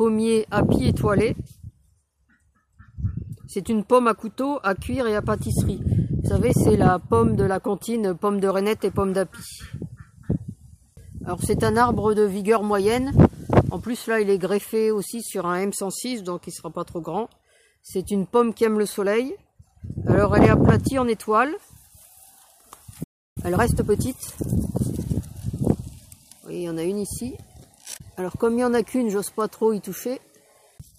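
At 23.03 s the sound halts for about 0.32 s, a playback stall likely caused by the player running short of data. From 23.38 to 24.66 s, time-compressed catch-up plays the audio 1.25 times faster at unchanged pitch, unlike a resampling speed-up, which would raise the pitch.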